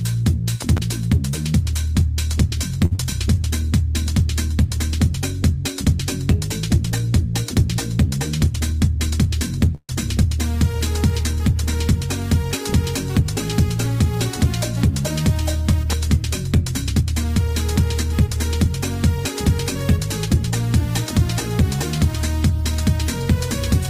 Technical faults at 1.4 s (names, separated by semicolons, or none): none